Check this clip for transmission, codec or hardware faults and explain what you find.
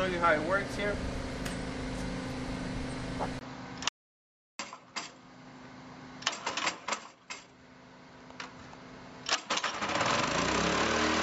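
Two faults turn up, starting at 3.39 s and 3.89 s.

At 3.39 s there is an input switched to a poorer device, likely a change to another microphone or a headset profile. After a 20 ms silence, the audio loses everything above 7.6 kHz, drops about 5 dB, sounds duller and boxier, and gains a faint new noise floor roughly 40 dB down. It stays that way to the end.

From 3.89 s to 4.59 s an audio dropout to silence follows, likely from the input link briefly failing while recording continued. For about 0.71 s the sound cuts to silence with no room tone, and whatever occurred in that gap is lost.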